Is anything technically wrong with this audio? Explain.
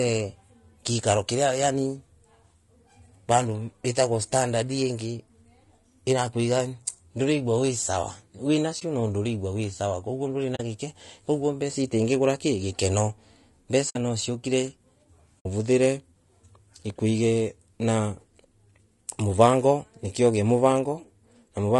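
Yes. Throughout the speech there is a rough, grainy texture, with a hiss-like fill between the harmonics of the voice and a top band that sounds thin and somewhat synthetic. This is most likely low-delay AAC compression of the AAC-ELD kind used for video calls. Its very short frames separate the pitch harmonics poorly and need more bits, so at a low bitrate, here plainly audible and consistent with roughly 32 kbps, noise creeps in around them and the highs are reconstructed coarsely.

There are also four brief dropouts from AAC frame loss with muting: at 8.79 to 8.82 s, just before "no nduregwa wi sawa"; at 10.55 to 10.60 s, between "wi sawa kaguo nduri" and "gikekoguo mbeca icio itingigura"; at 13.89 to 13.96 s; and at 15.39 to 15.46 s. They last about 20, 40, 60 and 60 ms, which points to one, two and then three lost frames. The decoder zeroed the missing frames' spectrum. The overlapping windows then fade the sound down and back up, so the single lost frame is a brief dip and the longer runs are soft-edged holes.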